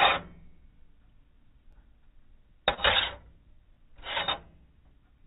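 Overlapping chunks appear from 1.73 to 1.75 s. The audio was handled in blocks of about 2 s, and at this join the new block began before the previous one had finished. That overlap made a 20 ms stretch play twice in a row. Because the duplicated stretch is so short, it comes across as a quick stutter or click at the seam rather than an audible echo of the material.

Short concealed packet loss follows from 2.74 to 2.80 s. About 40 ms of audio did not arrive in time to be decoded, and the receiver covered roughly 31 ms of that gap with substitute sound. It built that fill by extending what came just before, then blended back into the real signal. The result is a brief smear or wobble, heard within a band that stops at 4 kHz, which points to a narrowband call codec such as G.711.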